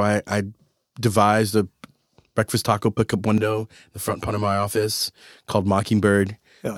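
From about 3.38 to 5.01 s there's channel delay (comb filtering): one side arrives roughly 10 ms late, and folding to mono cancels evenly spaced frequencies from somewhere around 40 Hz upward. The speech goes hollow and phasey there, like it's coming through a tube.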